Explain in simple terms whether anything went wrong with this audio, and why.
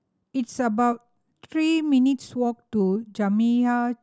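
Nothing went wrong with this speech recording. There are no dropouts, glitches or other problems at any point, so there is nothing to fix.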